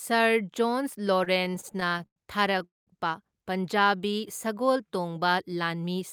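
From 1.19 to 2.62 s the speech breaks into repeated stalls, a stutter. Nineteen short gaps fall across this span, the longest about 102 ms. Packets kept arriving late, so the jitter buffer ran dry again and again. Each time, the receiver stretched the last sound to cover the wait. Those fills add up to about 307 ms, roughly a fifth of the span. Nothing is lost. The speech just drags and jerks forward.

A call audio freeze follows at 2.64 s and lasts until 2.89 s. The last sound carries on briefly, then fades out. About 180 ms of that gap is plain silence. In all, about 227 ms is filled in, and the speech then resumes where it stopped. Nothing is skipped. The cause is likely a burst of packets held up in transit, which emptied the buffer and pushed the delay back by that same amount.

From 3.79 to 4.73 s a jitter buffer slow-down stretches the speech. The buffer needed to rebuild its reserve. 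To do that, the receiver repeated single pitch periods many times over. This adds about 99 ms to the passage. Speech runs at about 90% of normal speed. Pitch stays the same. Sounds come out drawn out and slightly sluggish.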